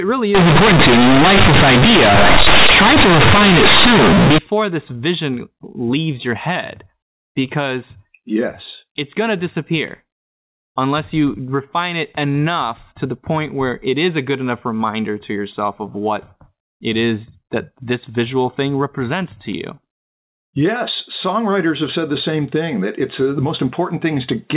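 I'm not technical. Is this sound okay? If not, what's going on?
No, not at the start. From about 0.35 to 4.38 seconds the speech turns into a harsh, very loud, buzzy roar with heavy noise in the gaps, and it clears up just before "this vision leaves your". That's companded audio read as linear: the sound was stored in mu-law, the telephone format that squeezes volume onto a curved scale, but it was played back as plain 8-bit samples without undoing that squeeze. Quiet bits end up as loud as shouting, and everything gets mangled. After that it's ordinary phone-quality speech.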